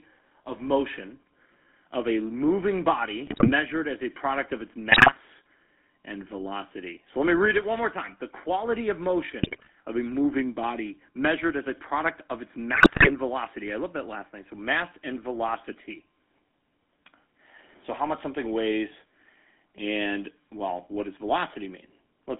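The whole clip carries the sound of the GSM full-rate codec, with plainly audible damage. The speech is confined to about 250 Hz to 3.5 kHz. The codec rebuilds the voice from a pulse-driven vocal-tract model, leaving a buzzy, gravelly roughness. This fits a 13 kbps GSM stream.

GSM bit errors break through four times: 3.26 to 3.51 s, 4.92 to 5.12 s, 9.41 to 9.70 s, and 12.74 to 13.12 s. Corrupted filter, pitch and gain values reach the decoder. The speech squawks, pops and gargles. The last burst is the longest and harshest.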